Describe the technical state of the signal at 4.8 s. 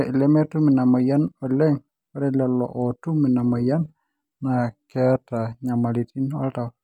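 At 4.8 s the speech sits audibly flat and slowed. From 3.81 s to 5.52 s the voice drops by 114 cents, a little over a semitone, and everything runs 6.39% slower, before snapping back to normal pitch and pace. This is most likely a drift correction step: clock-matching software abruptly lowered the playback rate to refill its buffer, shifting speed and pitch together until the correction released.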